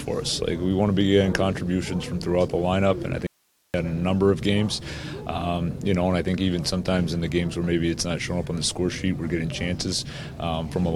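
The signal path likely lost its input for about 470 ms while the chain after the break stayed live, producing an audio dropout to a faint residue from 3.27 to 3.74 s: the sound cuts abruptly to hiss, roughly 45 dB below the signal, then snaps back.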